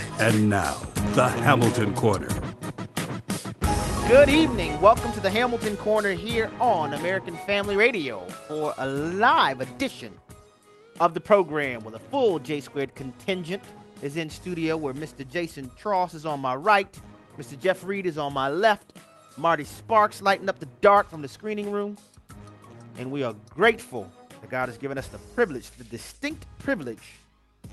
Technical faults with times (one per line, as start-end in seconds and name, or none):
none